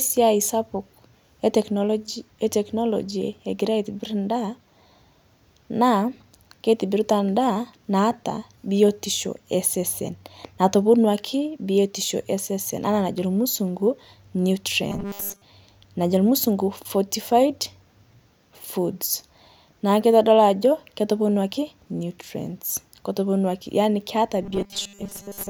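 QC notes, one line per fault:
14.90–15.42 s: robotic sound from repeated short buffers. The voice becomes a rigid metallic buzz fixed near 200 Hz, likely from a 5 ms chunk replayed while most real audio is skipped.
24.42 s to end, after "keitoponuaki nutrients keitoponuaki yaani": robotic sound from repeated short buffers. The same 200 Hz metallic buzz, likely from 5 ms repeats replacing most of the incoming audio.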